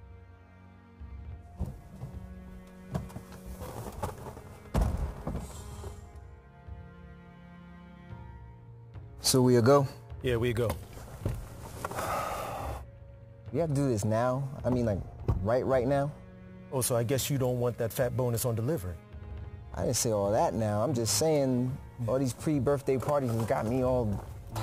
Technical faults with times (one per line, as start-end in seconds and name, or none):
0.00-24.63 crude rate conversion